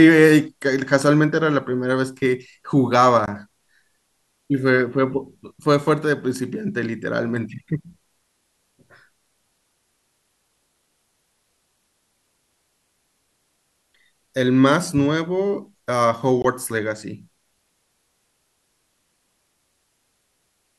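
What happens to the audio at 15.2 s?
Nothing goes wrong at 15.2 s; the speech carries on intact through that moment.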